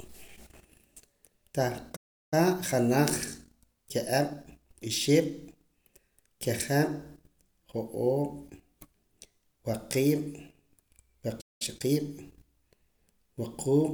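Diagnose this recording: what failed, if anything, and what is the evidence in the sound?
Playback stall at 1.96 to 2.34 s and 11.41 to 11.62 s: the speech drops to silence for about 0.36 and 0.19 s, likely a starved player buffer.

Time-compressed catch-up from 2.34 to 5.34 s at 1.1 times speed and from 11.62 to 12.00 s at 1.5 times: the player trims the backlog, rushing speech at normal pitch.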